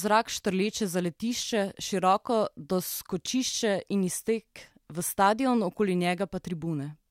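Listening closely to the speech turned up nothing that stood out as a technical fault.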